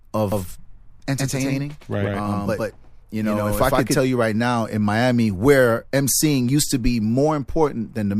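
From 0.32 to 3.98 s, a second capture path likely adds a doubled audio track: an equally loud copy lagging a tenth of a second, starting abruptly just before "you right now in".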